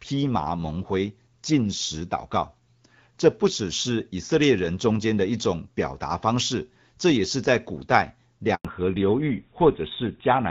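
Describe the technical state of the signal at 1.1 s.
At 1.1 s the speech is intact, with no fault present, carried through an AMR wideband (HD Voice) path at 12.65 kbit/s that introduces only light coding damage.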